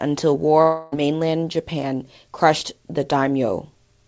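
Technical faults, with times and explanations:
0.62–0.94 s, long network dropout: for about 0.3 s the last sound is carried on as a buzzy, fading continuation rather than dropping to silence. The speech then resumes without that stretch. This is likely a run of lost packets that the receiver's concealment filled in.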